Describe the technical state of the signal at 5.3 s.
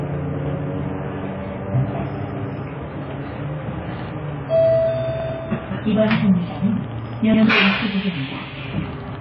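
At 5.3 s the signal sits at the end of a repeated buffer running from 5.20 to 5.29 s. A block of about 93 ms, which fits a 4,096-sample buffer, plays a second time because fresh audio did not reach the output in time. The repeat shows up as a short stutter with a hard join at each restart, and roughly a tenth of a second of new material is missing where the duplicate stands in for it.

Underneath that, the whole passage is band-limited, with nothing above about 6.5 kHz. The remaining spectrum sounds dull and smeared, with a warbling, fizzy grain on sustained and noisy content. This points to very low-rate coding, around 16 kbps, and the likely cause is heavy AAC compression (AAC-LC). At that rate the encoder drops the top band and quantises the remaining frequency lines coarsely, leaving spectral holes and substituted noise.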